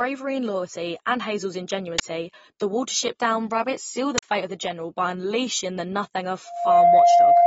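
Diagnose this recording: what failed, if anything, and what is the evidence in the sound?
The codec stage is the likely culprit: the speech has no content above about 7.7 kHz and sounds dull and smeared with a fizzy, warbling edge on sibilants throughout. That fits AAC compression at a low bitrate around 24 kbps, where band-limiting and coarse quantisation discard detail.

At the driver or buffer stage, a buffer was played before any audio was written to it, so leftover memory came out as samples. This uninitialised buffer fault gives a sharp burst of digital noise at 1.99 s, lasting about 12 ms, which fits a 512-sample block. A second burst runs from 4.18 to 4.23 s, about 46 ms, consistent with a 2048-sample block.

Acoustically, a microphone picked up the loudspeaker it feeds, and the loop gain passed unity at one frequency. The result is a loudspeaker feedback squeal: a 694 Hz tone that starts at 6.46 s, swells within roughly a third of a second to about 15 dB above the speech, and holds until the end.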